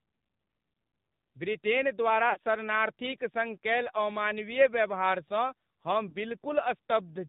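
The whole clip has passed through the AMR narrowband mobile codec. Nothing above 4 kHz survives, so the speech sounds thin and boxy. The low bit budget makes it buzzy and synthetic, which fits the 7.4 kbps mode. The damage is plainly audible.

From 2.30 to 2.38 s, just after "ब्रिटेन द्वारा", lost AMR speech frames leave a gap of about 60 ms, which points to three dropped frames. The decoder stretches the last good sound as it fades. At 6.10 to 6.16 s, a single 20 ms loss causes a brief dip or warble.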